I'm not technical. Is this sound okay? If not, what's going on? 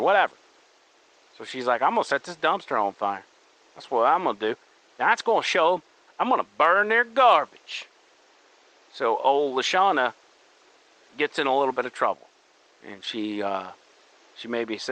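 Yes, nothing is wrong with this sound.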